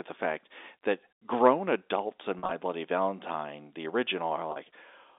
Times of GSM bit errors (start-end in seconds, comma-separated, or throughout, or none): none